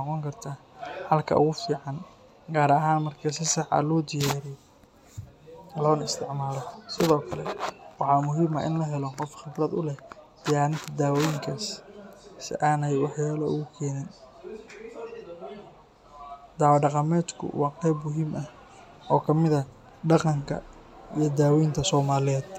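No technical faults can be heard anywhere in this speech recording.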